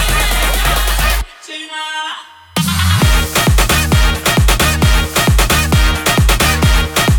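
Throughout the sound, a USB whine sits at a fixed pitch on 1 kHz and its multiples, strongest at 3 kHz and roughly 40 dB below the signal. The bus's 1 ms frame current leaks in through power or ground, drawing steady horizontal spectrogram lines.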